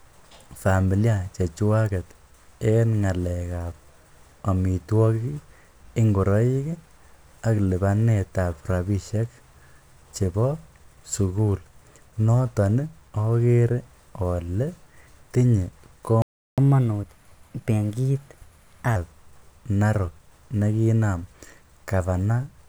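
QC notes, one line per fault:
16.22–16.58 s, playback stall: speech cuts to silence for 357 ms mid-flow, then resumes where it stopped, likely the player starving for data rather than a dropout.
16.58–18.96 s, catch-up at higher speed: speech runs 1.15 times fast and about two semitones sharp, resampled to recover lost time, unlike steady speed error.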